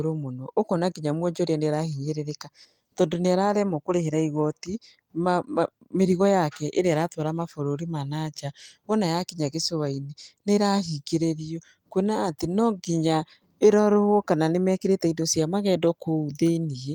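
Nothing stood out on listening to this speech recording.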